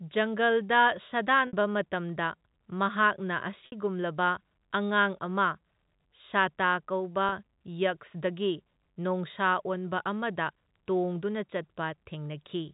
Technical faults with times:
1.47-1.53 packet loss with pitch repetition
3.66-3.72 packet loss with pitch repetition
7.29-7.32 packet loss with pitch repetition

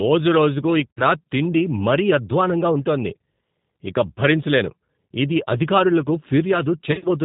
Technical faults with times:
0.00-7.25 G.729 codec
0.92-1.02 VoIP packet loss concealed by the speech codec
6.92-7.08 VoIP packet loss concealed by the speech codec

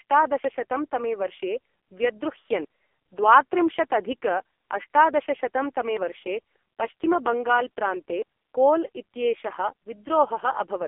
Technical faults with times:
0.00-10.88 AMR narrowband mobile codec
5.97 dropped buffer (overrun)
7.04 dropped buffer (overrun)

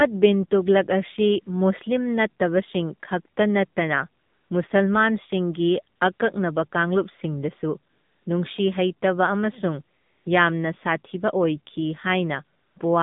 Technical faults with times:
0.00-13.03 AMR narrowband mobile codec
4.22-4.50 AMR comfort noise
5.96-6.20 AMR comfort noise
7.92-8.26 AMR comfort noise
9.98-10.26 AMR comfort noise
12.58-12.76 AMR comfort noise

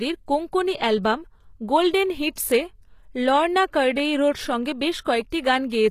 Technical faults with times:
0.00-5.90 HE-AAC compression

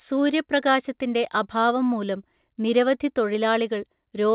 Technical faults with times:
none

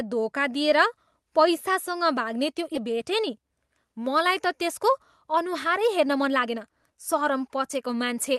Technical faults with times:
2.75-2.77 skip ahead
4.29-8.36 jitter buffer speed-up

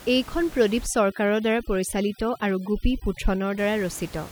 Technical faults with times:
0.86-3.58 overdone noise removal

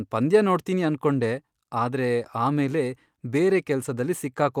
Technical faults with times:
none

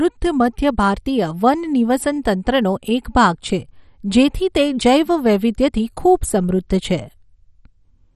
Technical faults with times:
0.00-8.16 MP2 compression

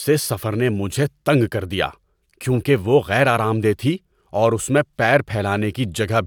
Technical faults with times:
none

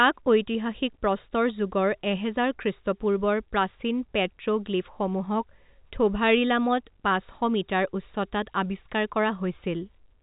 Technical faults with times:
none

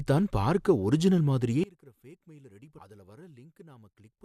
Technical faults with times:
1.64-4.25 one channel inverted

